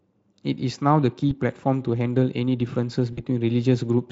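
At 1.29 to 1.33 s and again at 3.13 to 3.20 s, VoIP packet loss concealed by the speech codec briefly stretches the speech into a fading buzz or coloured noise, consistent with one and then two lost 20 ms frames. The decoder extrapolated its last pitch and filter at falling gain. A spectrogram shows smeared, repeating harmonics that decay, and the waveform shows a shrinking periodic envelope. The Speex coding underneath does only light damage.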